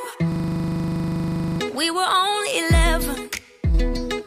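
From 0.32 to 1.6 s, a system hang loop occurs. The computer stalled while the audio hardware kept replaying one 40 ms stretch of its buffer. That fragment repeats 32 times at 25 Hz, giving a rigid, buzzing stutter, and about a second and a half of the real sound never arrives.

Between 3.16 and 3.74 s, the level abruptly falls by about 6 dB and then returns. This is likely one channel dropping out: with one stereo side missing, the mono sum keeps only half of the shared content, and anything present only on that side disappears.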